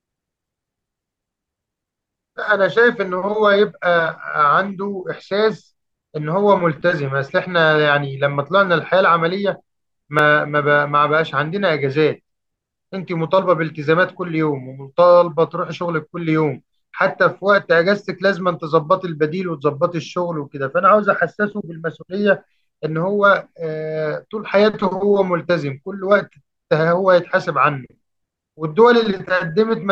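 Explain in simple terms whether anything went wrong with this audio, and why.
At 10.19 s the speech drops out for a very brief moment, about 1.3 milliseconds, in a fault known as a block of digital silence. A small chunk of the audio was replaced with pure zeros, which fits a 64-sample block left empty when the playback or processing software failed to deliver its next piece of sound on time. The signal cuts off and returns abruptly with no fade, so the gap is heard as a single tick or click rather than a pause.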